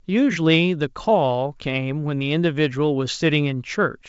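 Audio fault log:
No faults logged; the speech sits in the normal G.722 wideband telephone band, with nothing above 7.7 kHz.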